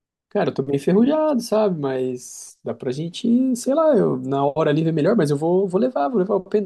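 No technical faults are audible in this speech.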